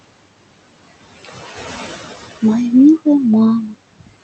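From the start, the speech carries noise suppressor artifacts: the suppressor pulls down the bands it judges to be steady noise, frame by frame, by about 19 dB, so the room noise, which sits about 13 dB below the speech, sinks in the pauses and swells back under each phrase. On a spectrogram the gaps show sparse, blinking speckles instead of an even noise floor, with the noise band thickening wherever speech energy appears. The spectrogram also shows a ceiling near 8 kHz, which fits a wideband Opus call path.

From 3.93 to 4.15 s, near the end, comes speech cut by the noise suppressor. The suppressor mistakes part of the speech for noise and turns it down with the background, by as much as about 21 dB, over roughly a tenth of a second in total. The sound is swallowed and faint. In the waveform the envelope collapses early. On the spectrogram the speech energy fades into the cleared background.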